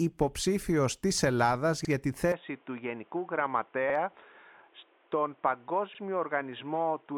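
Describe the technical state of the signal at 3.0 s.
At 3.0 s the signal is band-limited, with nothing above 3.8 kHz, from 2.32 s to the end of the clip. The switch comes without a gap, and the level drops by roughly 5 dB. A new noise floor sits well below the signal. The cause is likely an input switched to a poorer device: a narrower-band microphone or a headset call profile took over, so the sound turns dull and boxy.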